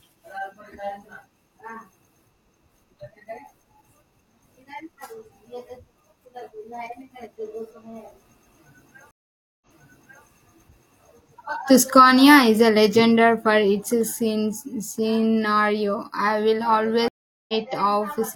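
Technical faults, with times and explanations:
9.11–10.25 s, stream reconnect: the speech drops out for about 0.51 s, then picks up 0.64 s earlier, so a short stretch is heard twice. The connection broke, the player went quiet, reconnected, and a new decoder started on a burst the server resent from before the break.
17.08–17.54 s, stream reconnect: after "scenario I will" there are about 0.41 s of silence, then the speech resumes roughly half a second further on. That missing stretch is skipped because the reconnection joined the live stream at a later point.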